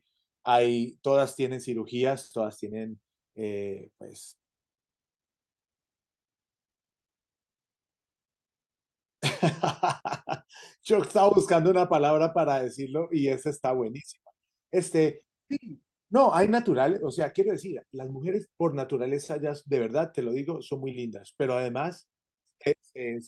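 From 15.13 to 18.25 s there is a call bitrate drop: the sound turns coarse and watery, with the top end dulled, consistent with the encoder falling from around 64 to 24 kbps for about 3 s. Unlike packet loss, nothing drops out or glitches.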